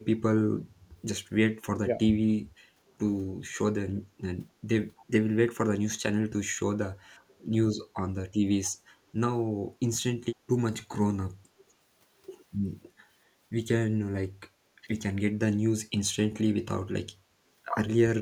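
Speech recorded through an echo canceller, with three kinds of fault. Speech suppressed in double talk occurs at 1.85–2.38 s, 7.06–7.10 s, 15.30–15.41 s and 15.95–17.16 s. The talker's level dips by roughly 10 dB at first, then by around 20 to 30 dB in the last two events. The likely cause is the canceller failing to tell this talker from loudspeaker echo while both sides spoke, so it turned everything down. On a waveform these are sudden notches in the envelope; on a spectrogram the harmonics and upper bands thin or vanish for those moments. Background gated by the echo canceller appears at 2.66–2.80 s, where the room tone drops by about 10 dB for roughly 150 ms and then returns. The canceller clamped the microphone while the loudspeaker played, and released it afterwards. It shows as a brief dark gap in the low-level noise floor on a spectrogram and a flat dip on the waveform. Echo leak occurs at 4.99, 8.66 and 10.79 s. 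Each is a faint scrap of delayed copy about 249 ms behind the original, very quiet at around 30 to 35 dB below the speech. It is likely residual loudspeaker pickup that the far end's canceller did not remove. On a spectrogram it appears as a weak ghost of the preceding harmonic pattern, shifted a quarter-second later.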